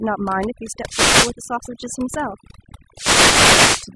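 From start to finish the speech carries overdone noise removal. A denoiser set far too aggressively has pulled down every frequency band it judged to be near the noise floor, taking quiet parts of the voice with them. Between phrases the background drops and breaks up into twinkling specks. A simple noise gate would instead cut the whole signal at once and leave no glitter behind.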